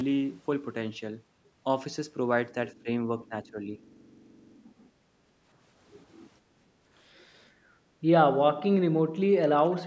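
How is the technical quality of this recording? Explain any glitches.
The recording has two kinds of glitch, both tied to echo cancellation on a call. The call's microphone processing leaves nothing above 8 kHz.

Speech suppressed in double talk occurs from 2.73 to 2.88 s and from 3.19 to 3.82 s. The speech dips by roughly 15 dB in patches. The likely cause is both sides talking at once. The echo canceller cannot tell this talker from loudspeaker echo, so it turns everything down.

Background gated by the echo canceller occurs from 5.15 to 5.36 s and from 6.41 to 6.85 s. The room sound drops by about 8 dB and about 7 dB, then returns. The canceller clamps the microphone while the loudspeaker plays, and releases it afterwards.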